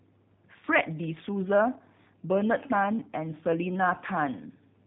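From start to finish the speech has that G.729 codec sound: nothing above 3.8 kHz, and a plainly rough, synthetic edge from rebuilding at what sounds like 8 kbit/s.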